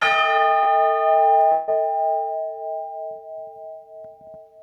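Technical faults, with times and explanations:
Throughout: gain pumping. The level swings by roughly 15 dB, squeezing loud and soft passages toward one level. The likely cause is input gain set far too high, with a fast limiter or compressor clamping down on each peak. Unlike a dropout or concealment, nothing goes missing; the level simply heaves with the signal.
0.63–0.68 s: short concealed packet loss. For about 20 ms the real audio is absent, and roughly 24 ms of substitute sound covers it: the receiver extends the preceding sound, repeating its pitch or shaping noise, then crossfades back. It comes across as a brief smear or wobble rather than a gap. Its shortness sets it apart from the later dropout, and the audio resumes with only a sliver lost.
1.52–1.70 s: long network dropout. About 160 ms of audio is missing, and nearly all of it, around 158 ms, is papered over by a continuation of the last sound. 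That continuation is heard as a fading buzz or hiss, and no stretch of silence follows before the real audio returns, further along and without the lost part. The likely cause is a stall in arriving packets. Its length and the audible decaying tone distinguish it from the brief smear at 0.63 s.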